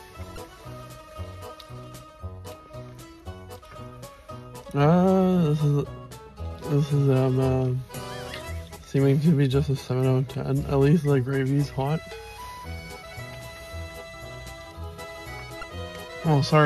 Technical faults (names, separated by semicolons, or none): damaged data in a compressed stream